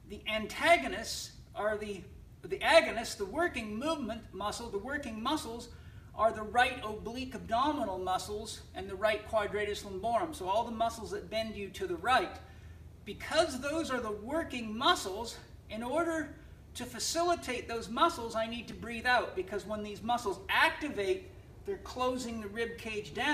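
Chunks out of order at 18.71 to 18.73 s: one block of audio about 10.67 ms long plays one block later than it should, swapping places with its neighbour. Nothing is missing, but the sequence is scrambled across roughly 22 ms, leaving three abrupt joins where the waveform doesn't line up. It comes through as a brief jumbled stutter.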